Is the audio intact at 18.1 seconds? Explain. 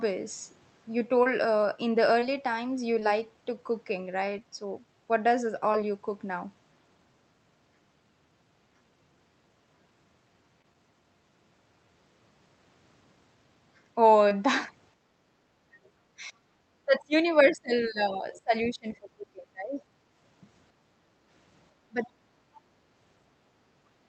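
No. From 17.51 to 18.53 s the echo canceller likely mistook simultaneous talk for its own loudspeaker echo and clamped down, so this is speech suppressed in double talk: the speech dips by up to about 25 dB, around 0.7 s in all.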